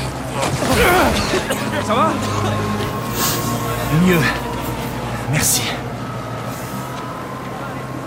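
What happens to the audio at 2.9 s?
At 2.87 to 2.89 s there are chunks out of order. One short chunk of audio, about 11.6 ms long, arrived late and plays one chunk after where it belongs. No audio is lost, only swapped. That swap creates three hard joins within about 23 ms. They are heard as a brief jumbled blip right at that moment.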